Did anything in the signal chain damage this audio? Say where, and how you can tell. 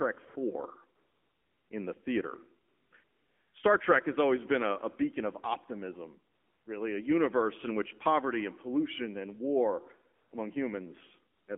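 Yes, at two stages: the mobile codec and its discontinuous-transmission handling.

The AMR narrowband mobile codec damages the whole clip. The speech is confined to roughly 200 Hz to 3.4 kHz, with nothing above 4 kHz. The voice has a plainly buzzy, synthetic texture. That texture points to a low AMR-NB mode, consistent with about 7.4 kbps. A plain telephone-band filter would only sound dull. Here the vocal-tract model and its sparse pulse excitation rebuild the voice coarsely, leaving a mechanical edge a filter alone never adds.

AMR comfort noise appears in seven pauses: 0.28–0.36 s, 0.96–1.70 s, 2.68–2.92 s, 3.04–3.54 s, 6.34–6.66 s, 10.16–10.32 s and 11.34–11.48 s. The longest runs 740 ms. In each gap the real background is swapped for a steady, smooth hiss that switches in and out at the edges. The sender judged the talker silent and stopped sending speech frames, and the receiver synthesised noise from a rough level and spectrum description. 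A noise gate or dropout would leave true silence instead.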